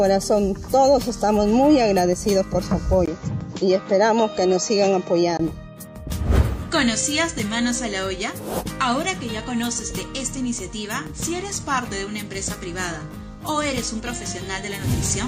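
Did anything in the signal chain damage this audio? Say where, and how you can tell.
Yes. Driver stage, 3.06 to 5.39 s: a 20 ms gap, nothing above 7.6 kHz, new noise about 35 dB down, level unchanged. Likely an input switched to a poorer device.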